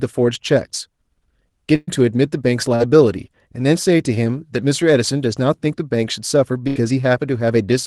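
From 1.75 to 1.90 s there is a burst of packet loss: about 120 ms never arrived, so the receiver stretched the last sound into a held buzz or hiss that fades before the audio jumps ahead. Unlike a brief concealment, the hold itself is audible. The same fault returns from 6.68 to 6.79 s, covering 80 ms.

Between them, at 2.75 to 2.83 s, a short concealed packet loss fills a 40 ms hole with continued sound blended back in, heard only as a quick smear or wobble rather than a sustained tone.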